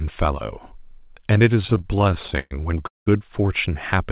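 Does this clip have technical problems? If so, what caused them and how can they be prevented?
Yes. Repeated stalls (stutter) occur between 1.62 and 3.08 s. Nineteen short gaps, the longest 195 ms, are filled by stretching the last sound. The jitter buffer kept running empty as packets arrived late. Nothing is lost, but about a third of that span is concealment. Narrowband sound, with nothing above 4 kHz, points to a G.711 call path. A steadier network or a deeper adaptive jitter buffer would prevent this.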